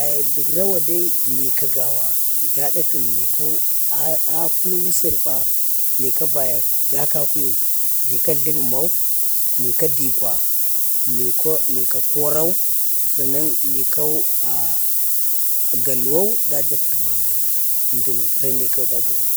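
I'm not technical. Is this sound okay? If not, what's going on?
No. Low bit depth with noise shaping runs through the whole recording. The speech is stored with very few levels, roughly what a 3-bit signal allows, and the rounding error is pushed into the highest pitches, giving a steady, thin hiss that is clearly audible, and even louder than the speech.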